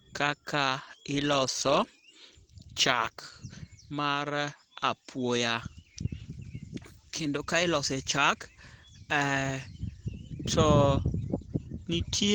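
Throughout the whole recording, the speech sounds plainly damaged: hoarse and muffled, with a grainy, rough texture in place of clean detail, even though content still reaches up to about 20.1 kHz. The likely cause is Opus compression at a low bitrate, consistent with about 16 kbps. That rate points to the encoder's hybrid speech mode, which codes the lower band with linear prediction and fills the upper bands coarsely, leaving this rough, husky character.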